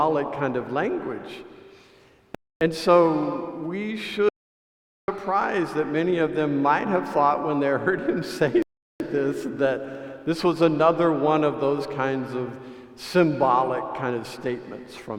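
At 2.35 s a rebuffering stall halts playback for 0.26 s. The player ran dry, then resumed exactly where it stopped. The same stall recurs at 8.62 s, adding 0.38 s. Between them, from 4.29 to 5.08 s, an audio dropout to silence cuts the sound mid-flow to total silence, with no room tone. The input was likely lost, and 0.79 s of sound is gone.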